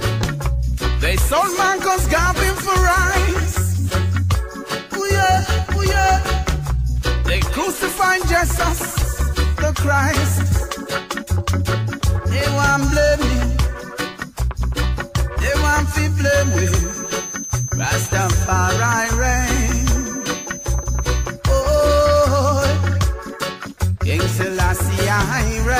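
From 16.17 s to 21.39 s a feedback whistle sits behind the sound: a thin, steady tone at 6.2 kHz, around 15 dB below the main signal, swelling and fading slowly in level. The likely cause is a loudspeaker-to-microphone loop held right at the edge of feedback, so one frequency sustains without building into a howl. That slow swelling and fading, rather than an unchanging level, separates it from an electrical interference tone.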